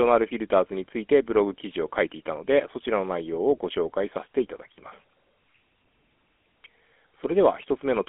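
Throughout, the GSM full-rate codec rebuilds the speech from a pulse-train excitation, leaving plainly audible buzzy, gravelly roughness, confined to 250 Hz to 3.4 kHz with nothing above 3.8 kHz.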